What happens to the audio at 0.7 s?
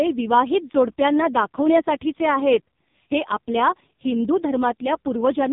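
At 0.7 s the speech is carrying the same AMR narrowband mobile codec damage that runs through the whole clip. Nothing above about 3.8 kHz survives, so the voice sounds boxed-in and telephone-like. The codec models the vocal tract and drives it with only a few pulses per subframe, and the damage here is heavy: a buzzy, synthetic quality that fits AMR-NB's lowest 4.75 kbps mode.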